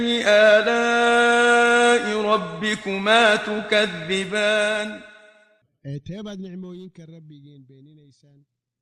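Nothing here stands out as a problem: the sound just eases down in a smooth fade-out that begins somewhere around the 4-second mark and tapers gently away, the way an editor would finish it.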